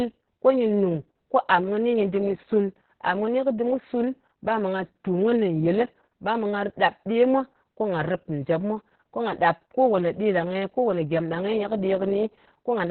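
Throughout, Opus voice compression runs its SILK coder at a starved rate, cutting the band to narrowband and coding the excitation coarsely. The speech loses everything above 4.3 kHz and sounds muffled, hoarse and slightly robotic, which fits a bitrate near 6 kbps.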